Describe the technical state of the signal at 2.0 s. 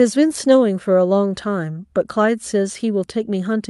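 At 2.0 s the speech is intact, with no dropout, glitch or distortion, and what can be heard of the call path there is only its normal coding, with the top end rolling off around 12 kHz.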